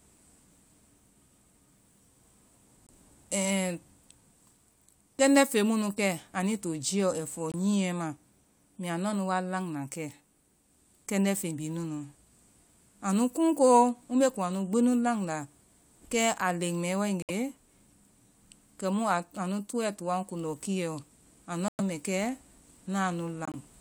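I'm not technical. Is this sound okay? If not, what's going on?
No. The speech cuts abruptly to silence five times, at 2.87, 7.52, 17.22, 21.68 and 23.45 s, for between about 30 and 120 ms each. This is corrupt frame muted: damaged pieces of the compressed file were rejected during playback and replaced with silence.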